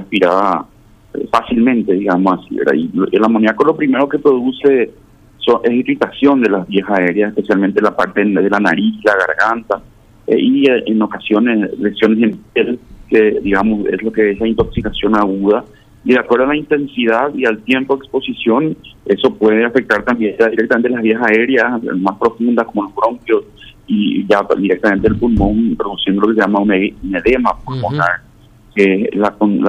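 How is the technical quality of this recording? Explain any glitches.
There's nothing glitchy here to explain; the recording holds together without any dropouts, clicks or other technical hiccups you'd need to worry about.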